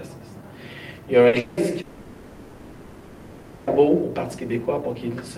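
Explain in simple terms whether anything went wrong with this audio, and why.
Something did go wrong, in three places close together.

First, at 1.27 to 1.36 s there is a burst of packet loss. A small group of data packets never arrived. The player covered the hole by stretching the last bit of sound for about 60 ms. So you hear a short held buzz or hiss. Then the audio jumps ahead, with about 60 ms of the real sound gone.

Next come two longer breaks. From 1.39 to 1.60 s, the last sound is held and repeated for about 180 ms. From 1.81 to 3.82 s, it is stretched again for nearly two seconds. Neither gap drops into silence. The filler sound runs the whole way through. Each time, the real audio picks up later, and the part in between is missing. This is likely a long network dropout, where nothing arrived at all and the player had to invent sound to fill the space.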